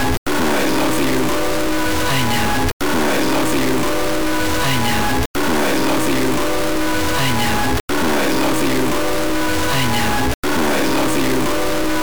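A stuck bit runs through the whole clip: harsh, buzzy distortion rides on every louder passage, and any pauses fill with loud noise rather than silence. That is likely one data line frozen at a fixed value, so a large share of samples are offset by a step of about -15 dBFS. Unlike clipping, which bites only on peaks, this error tracks the waveform's sign and persists even when the audio is nearly silent.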